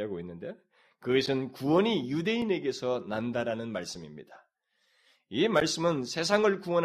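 Four sharp ticks cut into the speech at 1.26, 2.42, 3.95 and 5.60 s. Each is a block of digital silence, where the audio drops straight to silence and returns with no fade. The gaps at 1.26 and 5.60 s last about 10.5 and 11.6 ms, still short enough to be heard as a tick or dip. Those at 2.42 and 3.95 s are only 2.9 ms and register as bare ticks. The lengths at 2.42, 3.95 and 5.60 s fit 128- and 512-sample output buffers that likely weren't filled in time.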